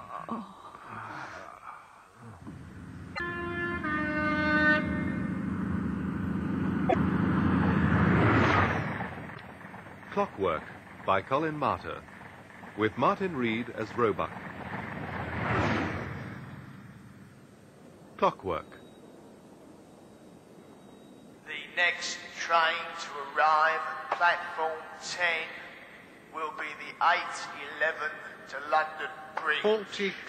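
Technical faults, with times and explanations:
3.12–3.20 s, 6.86–6.95 s, 9.31–9.40 s: damaged data in a compressed stream. Corrupted bytes make the decoder misread frames and lose sync, giving brief blips of about 80 to 95 ms.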